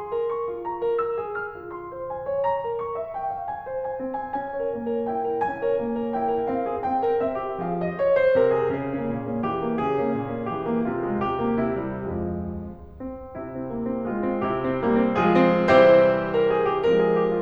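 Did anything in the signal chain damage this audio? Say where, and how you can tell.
No, nothing in the chain shows any audible damage to this music: level, timing and tonal balance hold steady at every stage a listener can judge.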